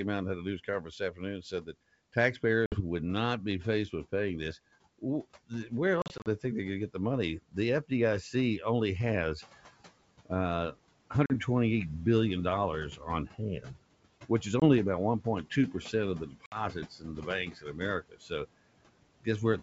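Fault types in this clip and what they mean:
noise suppressor artifacts: The suppressor applies per-band gain frame by frame, pulling down whatever it judges to be steady noise by about 18 dB. The background sinks in the gaps between phrases and comes back up underneath the talker, so the noise floor pumps with the speech. This continues after the room noise rises by about 10 dB near 9.5 s.
speech cut by the noise suppressor: In five stretches the suppressor treats part of the speech as noise and attenuates it along with the background. The affected spans are 0.44 to 1.75 s (just after "out and had a"), 5.0 to 5.7 s, 7.42 to 7.57 s, 13.0 to 14.3 s and 16.3 to 18.3 s. Dips reach about 14 to 19 dB, so quiet consonants and word endings come out swallowed or faint.
packet loss on an ADPCM call: Lost packets are replaced with hard-edged silence. The silence also desynchronises the ADPCM decoder's predictor and step size, so the speech returns slightly distorted before it resettles. 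The gaps are a 60 ms hole ending at 2.81 s, before "would not be faced"; 120 ms of scattered dropouts across 6.02 to 6.28 s, in runs up to 40 ms; 40 ms at 11.26 s; 20 ms at 14.60 s; and 60 ms near 16.46 s, after "of the".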